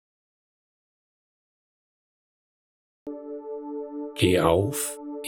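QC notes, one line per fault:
0.00–3.07 s, audio dropout to silence: opens in dead silence with no room tone until sound cuts in; input likely lost while recording continued.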